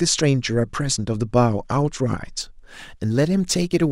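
From 2.41 s to the end, sample clock jitter sets in: the converter's timing wobbles by a few microseconds, so steep, bright parts of the speech gain a gritty hiss about 30 dB down. Unlike a steady noise floor, it disappears in pauses.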